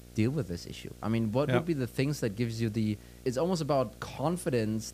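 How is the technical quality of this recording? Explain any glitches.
The recording is marred by video or display buzz running through the whole clip. A screen or video cable is leaking into the audio path. It buzzes at the 59.94 Hz field rate, with hash above it. A thin 15.7 kHz line-rate whine sits on top. The interference stays audible under the speech throughout.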